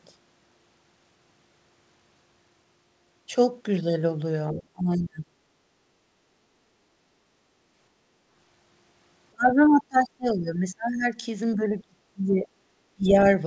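From 4.53 to 5.36 s, and again at 9.31–11.14, 11.55–12.50 and 12.96–13.28 s, the speech itself sinks by up to about 35 dB, likely speech suppressed in double talk. Unlike gating, the talker is cut, not just the room. At 5.64–5.77 and 6.09–6.13 s, only the background dips, by about 6 and 5 dB, as the echo canceller gates it. Throughout, the call band stops at 8 kHz.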